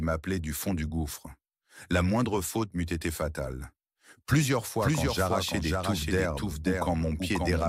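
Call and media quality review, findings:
Doubled audio track, 4.81 s to end: full-band second copy about half a second behind, roughly 5 dB down, no decay or room colour, abrupt onset. Likely duplicate capture via slower path, or misaligned edit.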